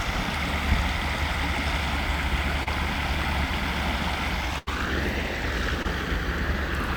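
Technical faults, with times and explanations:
2.63 to 2.68 s and 5.83 to 5.86 s, short concealed packet loss: About 20 ms of audio went missing each time. The receiver continued the preceding sound to cover it, for 27 ms and then 16 ms, before blending back. Each gap comes through as a brief smear or wobble.
4.58 to 4.69 s, burst of packet loss: About 80 ms in a row failed to arrive in time. The receiver held the last sound for 85 ms and faded it down, giving a held buzz or fading hiss. The audio then jumps ahead, with that stretch lost.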